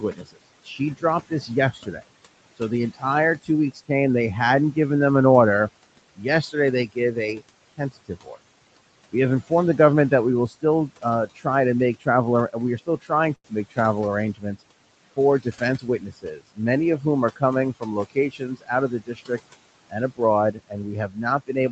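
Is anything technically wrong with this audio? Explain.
Yes. Four kinds of fault can be heard in this speech.

Noise suppressor artifacts run through the whole clip. The suppressor pulls down the bands it judges to be steady noise, frame by frame, by about 21 dB. The room noise, about 17 dB below the speech, does not stay level. It drops away in the pauses and comes back under the speech.

Speech cut by the noise suppressor happens six times: 0.0 to 2.02 s, 2.56 to 3.9 s (just before "they hadn't given them"), 6.16 to 8.38 s (right after "given them an order"), 9.12 to 13.78 s, 14.34 to 14.62 s, and 15.16 s to the end. The suppressor mistakes parts of the speech for noise and turns them down with the background, by about 18 to 22 dB at worst. Soft consonants and word endings sound swallowed or faint. Within each of the first five stretches only short pieces are hit, adding up to less than a second.

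A short stall from a late packet occurs at 13.35 to 13.46 s. A packet arrived late and the jitter buffer ran dry. The receiver held the last sound for 90 ms until the packet came, then carried on from the same point. Nothing is lost. You hear a sound stretched too long, with a slight buzz or dip.

A jitter buffer speed-up runs from 15.42 to 15.96 s. The buffer had built up more audio than it wanted, so the receiver cut out many tiny pitch-period pieces to shrink the delay. Roughly 70 ms goes missing there. The speech plays at 113% speed with its pitch unchanged, so this half second sounds hurried.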